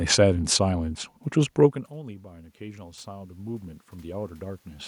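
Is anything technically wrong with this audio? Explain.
Yes. From 1.94 s to about 4.83 s the voice and the room noise behind it swell up together, slowly, across nearly three seconds. This is automatic gain rising: shortly after the talker moves back from the microphone around a second and a half in, the input level drops by about 23 dB, and the automatic gain control responds by gradually raising its gain by about 11 dB, lifting the background along with the voice.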